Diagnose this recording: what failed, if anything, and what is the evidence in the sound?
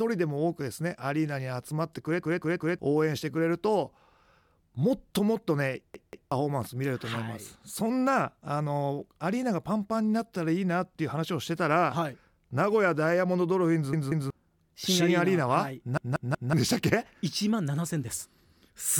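The speech stutters at 2.23–2.79 s, 5.94–6.32 s, 13.93–14.30 s and 15.98–16.53 s, as a 186 ms slice replays two or three extra times with hard joins. This is a repeated buffer at the driver stage, fitting an 8192-sample buffer: late audio left the device replaying its last block.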